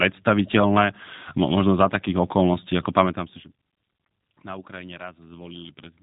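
From start to finish the speech carries plainly audible G.729 codec damage: a rough, synthetic buzz from low-bitrate pulse-based reconstruction, likely 8 kbit/s, with nothing above 3.8 kHz.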